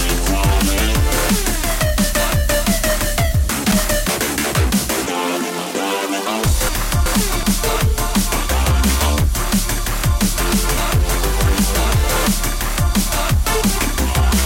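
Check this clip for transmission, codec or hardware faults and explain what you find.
One fault recurs three times: chunks out of order, at 3.34–4.09 s, 6.69–7.43 s and 10.40–11.15 s.

Chunks out of order: each time, a block of about 0.37 s arrives one chunk late and plays after its successor. This makes a jumbled moment with three hard joins, which appear as vertical broadband lines on a spectrogram and as waveform steps.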